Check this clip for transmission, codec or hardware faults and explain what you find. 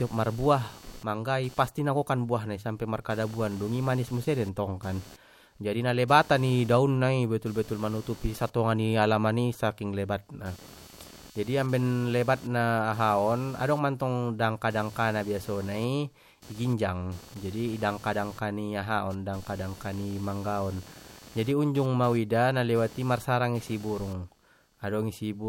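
There's one fault. Computer activity noise runs through the whole speech clip: a buzzy chirp pulsing around 300 Hz, roughly 25 dB down, from processor load disturbing the shared audio ground.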